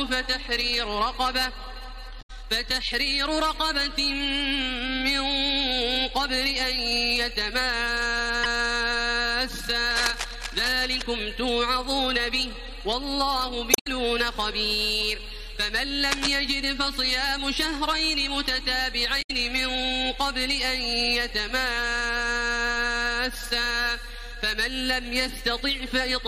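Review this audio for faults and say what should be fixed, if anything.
Four spots of damaged data in the compressed stream, at 2.18–2.30, 8.43–8.46, 13.70–13.87 and 19.18–19.31 s. The decoder hits bad frames, loses sync and jumps to the next header, so you get short glitches. Re-fetch from a clean source or verify checksums.

There are two bursts of cable scratch noise, from 9.91 to 11.02 s at about 10 dB below the signal and from 16.04 to 16.36 s at about 5 dB below. Both are rough rustling over the sound, likely from a worn connector or control being moved. Replace or clean that cable before re-recording.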